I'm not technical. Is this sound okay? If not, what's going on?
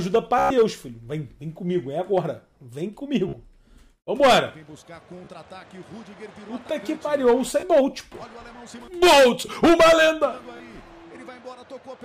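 No. The sound has Bluetooth stutter, a wireless hiccup. At 0.39 to 0.50 s, 3.29 to 3.33 s, 5.25 to 5.28 s, 7.60 to 7.63 s and 10.57 to 10.60 s, data arrived late or got lost, so the receiver kept replaying its last tiny slice. You hear a brief buzz rather than silence, which sets it apart from a plain dropout. The first one is longest. Afterward the sound jumps ahead instead of resuming where it paused.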